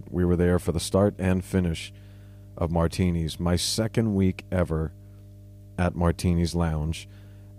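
From the very start to the end of the speech there's mains hum, a steady low drone sitting at 50 Hz with a bit of low harmonic buzz on top. It's fairly prominent too, roughly 20 dB under the speech, so you hear it clearly in the pauses. That's the power line leaking into the signal, almost certainly through a ground loop or a transformer sitting too close to the cabling or gear.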